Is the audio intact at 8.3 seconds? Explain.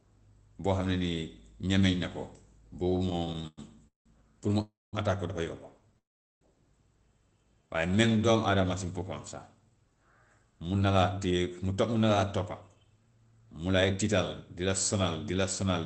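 No. From 7.56 to 8.33 s the speech drags, running at about 89% speed with unchanged pitch and sounds drawn out. This is a jitter buffer slow-down: with its reserve low or its target delay just raised, the receiver repeated pitch periods, stretching the passage by 95 ms.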